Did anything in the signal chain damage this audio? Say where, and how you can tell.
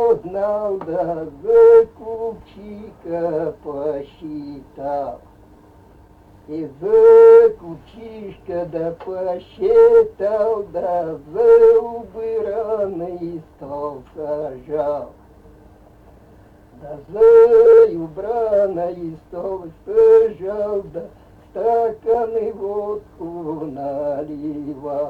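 No, nothing in the audio stood out on listening as damage from any stage of the signal chain.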